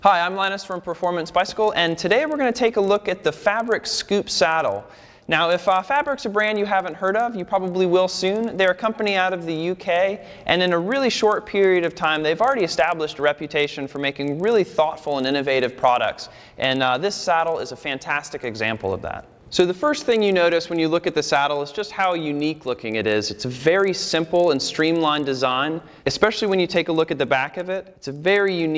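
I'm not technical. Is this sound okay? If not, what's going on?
No. The fault is a resampler restarted on every block. When the audio was converted to a lower sample rate, the converter handled it in separate 40-millisecond chunks and started fresh each time, so it never saw the chunk next to it. Each join is slightly wrong. That puts a tiny tick at every chunk edge, 25 times a second, from start to finish. Heard together, the ticks blur into a rough buzz whenever there is sound, and fall away in silence.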